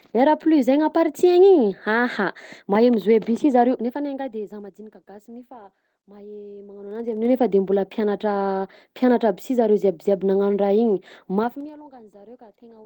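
From 6.78 to 7.34 s the level climbs about 20 dB in 2 dB jumps, and from 11.39 to 11.73 s it falls about 25 dB in 3 dB jumps. This is zipper noise: unsmoothed gain steps, roughly twenty a second, each ticking. Unlike random clicks, the ticks follow the level ramp.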